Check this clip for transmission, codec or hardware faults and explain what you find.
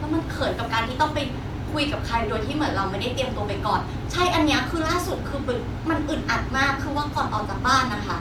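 Nothing in this speech recording points to a fault of any kind. There is nothing to report at any point in the audio.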